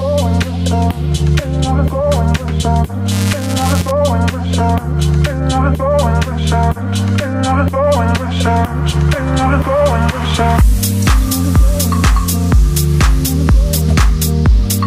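From 3.11 to 3.91 s there is buffer tearing. The writing process and the playback hardware have drifted out of step, so their positions in the ring buffer cross in every period. A small sliver of each buffer still holds audio left over from the previous lap, a few milliseconds stale, spliced in with hard edges. The result is a rattling buzz at 375 Hz, a rate that fits a 128-sample buffer, heard only while signal is present.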